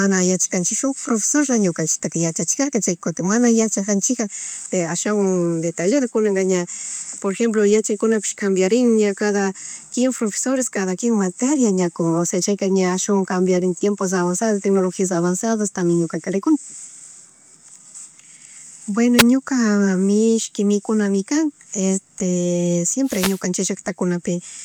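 At 19.18 s, a wireless microphone noise hit cuts in for about 50 ms. At 23.03 s, a longer one runs to 23.43 s. The FM radio link fades as reflections cancel. Receiver noise then swells into a swish of static over the speech.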